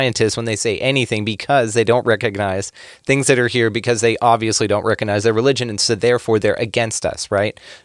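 No technical faults can be heard in this speech recording. Nothing in the signal stands out as a problem at any moment.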